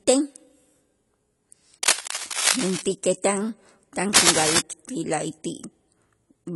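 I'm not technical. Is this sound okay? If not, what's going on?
No. Cable scratch noise at 1.83 to 2.82 s and 4.13 to 4.59 s: a scratching rustle as loud as or louder than the speech, likely from a worn cable or connector being moved.

AAC compression throughout: the speech sounds dull and smeared, with nothing above 11.5 kHz, likely from saving it as a small, heavily squeezed file.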